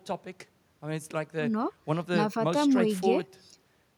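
Speech recording with no audible technical faults.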